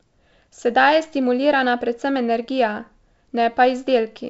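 No technical faults are audible.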